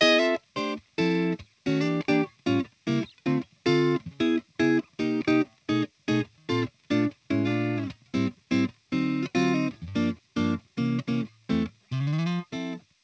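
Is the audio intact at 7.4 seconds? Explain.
Yes, the audio is intact at 7.4 seconds, with only the steady band limit of the WebRTC call path, consistent with G.722 at 64 kbps, so nothing above 8 kHz.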